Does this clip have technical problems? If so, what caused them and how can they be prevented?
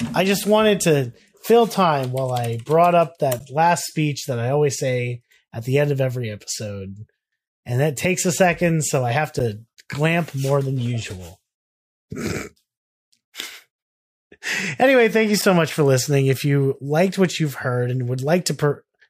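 Yes. There are three brief dropouts in the speech, at 3.39 s, 9.39 s and 15.42 s. Each is a gap between stream segments. The holes last about 11 ms, 8.5 ms and 6 ms. They have hard edges and fall 6 s apart, which matches the segment length. Their time stamps leave small gaps, and the player fills each one with silence. No audio is lost. To prevent this, cut segments so that each starts exactly where the previous one ends.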